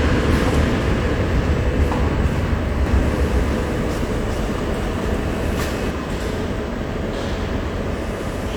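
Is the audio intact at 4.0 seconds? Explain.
No, at 4.0 seconds you're inside a doubled audio track running from 2.86 to 5.90 s. A second full-band copy trails the original by roughly 400 ms at about the same level, likely from a slower capture path or misaligned edit, so everything sounds echoed with no decay, then cuts off abruptly.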